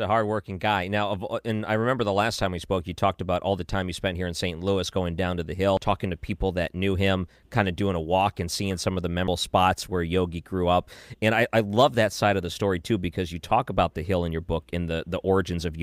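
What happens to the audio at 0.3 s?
Nothing goes wrong at 0.3 s; the speech plays through that moment intact, with no dropout, click, distortion or other fault.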